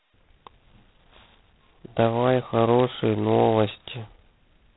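A harsh, rasping hiss rides on the speech from start to finish, swelling and fading with its level, and nothing above 3.9 kHz comes through. This is heavy G.726 ADPCM damage: so few bits per sample, consistent with 16 kbit/s, leave coarse prediction error.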